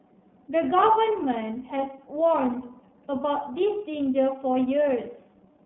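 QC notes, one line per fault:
Throughout: iLBC codec. The band stops near 3.8 kHz, and the speech sounds rough and a bit synthetic from each 30 ms frame being coded alone, which fits the 13.33 kbps mode.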